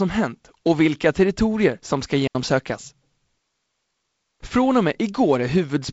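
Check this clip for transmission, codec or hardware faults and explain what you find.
There is one fault: a digital wireless dropout from 2.28 to 2.35 s. The receiver lost too much of the radio data stream and muted for about 75 ms, fading down quickly to leave a clean hole of near silence. An analogue wireless dropout would bring hiss or a crackling burst at its edges. Here there is none on either side of the gap.

The sound stops at 7.7 kHz and carries a faint hiss in the upper band, which fits G.722 wideband coding at 48 kbit/s.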